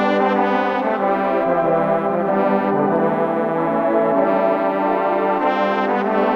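No technical faults can be heard anywhere in this music.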